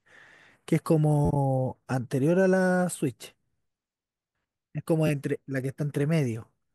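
New audio reached the device late, so it replayed its last buffer. Each repeated buffer, about 12 ms long and consistent with a 512-sample buffer, gives a brief buzzy stutter at 1.25 to 1.30 s and again at 5.07 to 5.10 s.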